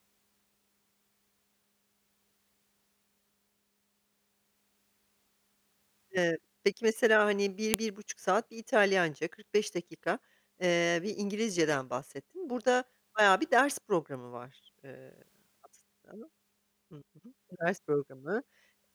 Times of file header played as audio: 7.74

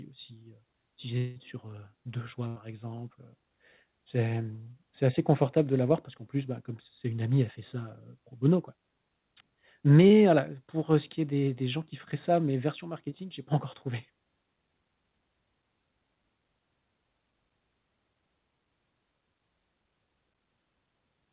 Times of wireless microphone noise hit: none

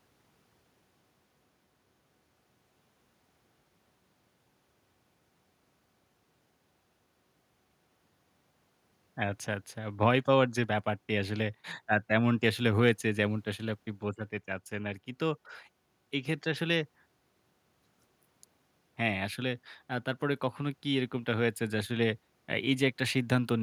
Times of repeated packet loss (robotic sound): none

